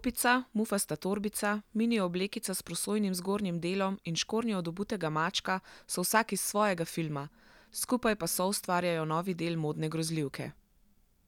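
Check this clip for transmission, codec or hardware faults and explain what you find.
No faults detected.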